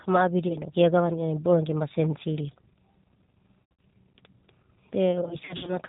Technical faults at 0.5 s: G.729 codec; VoIP packet loss concealed by the speech codec

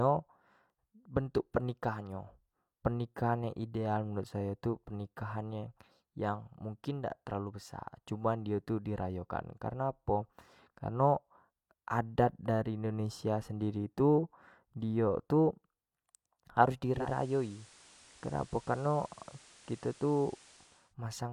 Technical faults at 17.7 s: digital radio blending to analogue

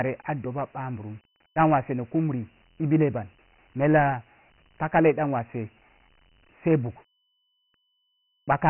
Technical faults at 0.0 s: Dialogic VOX ADPCM

